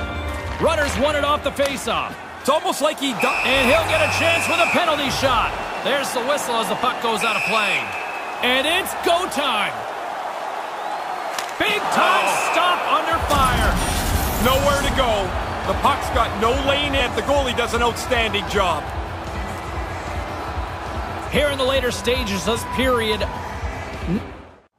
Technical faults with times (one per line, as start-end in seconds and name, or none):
2.11-2.16 compressed frames skipped
10.24-10.27 compressed frames skipped
13.77-13.81 compressed frames skipped
16.98-17.02 compressed frames skipped
22.55-22.58 compressed frames skipped